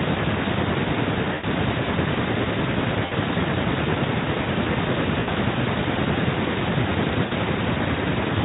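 At 1.33 to 1.45 s, 3.05 to 3.12 s, 5.19 to 5.30 s and 7.25 to 7.33 s the speech shows VoIP packet loss concealed by the speech codec. Roughly 100, 60, 80 and 60 ms of audio went missing, consistent with dropped 20 ms frames. The Speex decoder filled each gap by repeating its last pitch and spectral shape at falling gain. Each gap sounds like a short, buzzy or noisy smear that fades, leaving the speech weak briefly afterward. On a spectrogram, the frozen spectrum stretches across each gap and dims. On a waveform, a repetitive stretch decays in amplitude.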